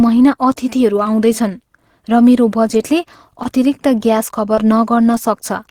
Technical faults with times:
1.03-1.07 short concealed packet loss
3.43-3.47 short concealed packet loss
4.55-4.59 short concealed packet loss

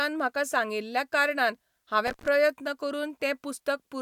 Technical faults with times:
2.07-2.28 intermittent contact

